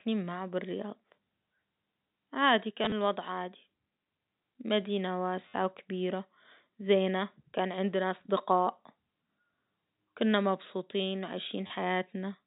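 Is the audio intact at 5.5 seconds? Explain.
No. From 5.48 to 5.54 s, just before "وكبيرة زينة كان عندنا", there is packet loss with the last packet repeated. About 60 ms of audio went missing. The receiver replayed the last packet to fill the gap. The result is a brief robotic buzz, consistent with 10 ms packets repeating at 100 Hz.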